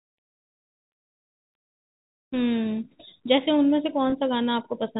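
Speech carried over G.711 telephone coding shows packet loss with pitch repetition at 4.10 to 4.12 s. About 20 ms of audio, consistent with a single lost packet, is bridged by repeating the last pitch period, so the sound briefly holds with a slightly buzzy quality before normal speech resumes.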